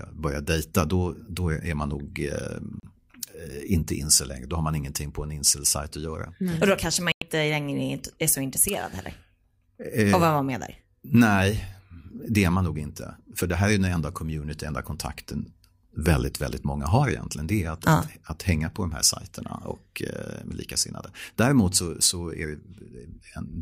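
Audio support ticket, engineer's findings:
Digital broadcast dropout, speech. Two mute holes, programme lost, not delayed. 2.80 s: brief gap, about 32 ms, fits one lost receiver frame. 7.12–7.22 s: longer hole, about 96 ms, between "då kanske man" and "längre är så intresserad", consistent with three consecutive frames failing checksum. Probable component: receiver/demodulator path. Mechanism: decoder mutes on corrupt or missing frames, resumes on first good frame. Check signal margin, reception.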